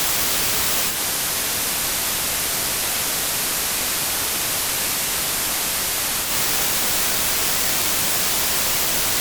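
At 0.87 s the sound cross-fades over about 127 ms from the digital stream to the FM analogue broadcast, a digital radio blending to analogue. It returns to digital at 6.34 s. While on FM, the level drops by about 2 dB, and a hiss appears roughly 30 dB below the signal. That steady hiss is what sets this apart from a codec bitrate drop, which would dull the top end without adding any noise floor.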